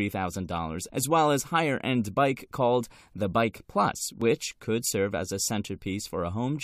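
At 4.22 s a brief glitch cuts through the speech, a sign of damaged data in a compressed stream. Corrupted bytes made the decoder misread a frame and jump ahead to the next header.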